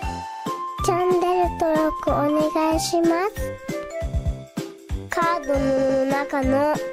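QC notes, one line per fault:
0.33–0.45 s, 4.13–4.37 s and 5.77–6.01 s: repeated frames. A short block of compressed audio is decoded again, making the sound stutter. A 60 ms block at 0.33 s and 120 ms blocks at 4.13 s and 5.77 s each play three times running, adding 120 ms and 240 ms. Those lengths fit runs of three and six codec frames. The waveform shows the same envelope copied side by side, and the spectrogram shows identical slices tiled in a row.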